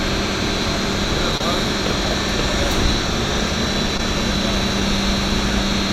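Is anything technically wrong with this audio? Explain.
Yes. Short concealed packet loss occurs three times, at about 1.37 to 1.41 s, 3.97 to 4.00 s and 4.80 to 4.82 s. In each case roughly 20, 20 and 10 ms of audio failed to arrive in time, and the receiver covered the gap by extending the preceding sound, repeating its pitch or shaping noise, for about 24, 17 and 11 ms before crossfading back. Each one is heard as a brief smear or wobble.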